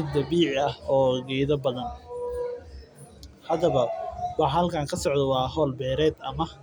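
No audible faults anywhere in the speech recording.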